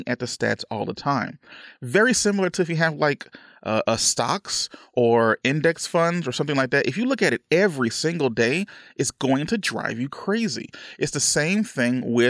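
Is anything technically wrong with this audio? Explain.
No technical faults are audible.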